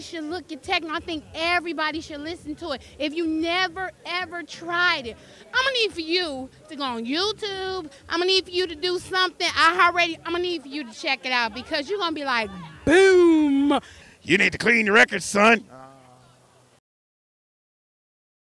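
No technical faults can be heard anywhere in the recording.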